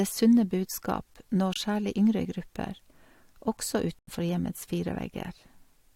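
Speech with corrupt frames muted at 1.54 to 1.58 s and 3.99 to 4.09 s: abrupt silent gaps where rejected frames were zeroed, timing intact, unlike dropouts that shift timing or smeared concealment.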